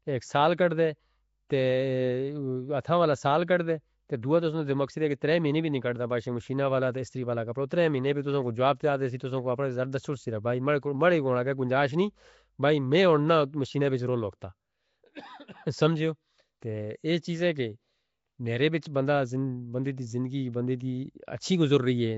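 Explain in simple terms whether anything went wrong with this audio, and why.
Something did go wrong, and it lasts the whole recording: the speech has a rough, hissy fuzz around it and a smeared, underwater feel, and nothing is heard above about 7.7 kHz, so it also sounds dull. The likely cause is Nellymoser compression, the old Flash microphone codec. It squeezes short chunks of sound into very few bits, leaves quieter frequency ranges empty, and fills them with noise, which creates the hiss and smearing.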